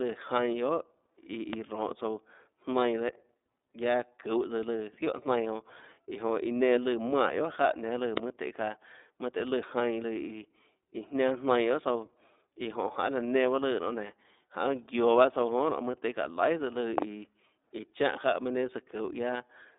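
iLBC codec, throughout: the speech has passed through this narrowband VoIP codec, whose sound fits its 30 ms frame mode at about 13.3 kbps. Each frame's excitation is coded independently, leaving the speech plainly rough and synthetic, with the band running about 250 Hz to 3.7 kHz and nothing above 3.8 kHz.

Loud pops, at 1.53 to 1.55 s, 8.17 to 8.20 s, and 16.98 to 17.04 s: a sharp pulse, likely a voltage step from a plug, switch, static discharge or driver glitch, lands on top of the speech, which continues underneath. The first peaks about 15 dB above the signal, the second about 20 dB, and the last is a double pop around 20 dB.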